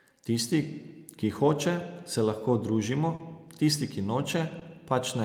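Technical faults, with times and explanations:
3.15–3.21 s and 4.59–4.63 s, short concealed packet loss: 40 ms and then 20 ms of the speech stream missed the decoder's deadline. The receiver stretched the preceding sound across each gap, as pitch if voiced or as shaped noise if not, and then crossfaded back, leaving a brief smear or wobble.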